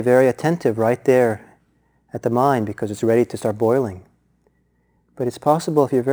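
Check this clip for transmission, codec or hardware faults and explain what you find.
There's one hardware fault running through the whole clip: sample clock jitter. The converter clock wobbles by something like 7 µs, so samples land early or late. That leaves a gritty hiss roughly 30 dB under the speech, worst on loud, bright sounds and gone in pauses.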